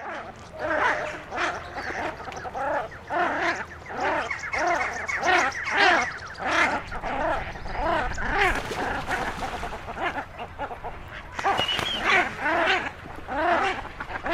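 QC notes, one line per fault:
9.65–14.33 s, adaptive stream at a lower bitrate: quality abruptly drops and codec artefacts rise with no gap, consistent with a switch from roughly 64 to 24 kbit/s Opus.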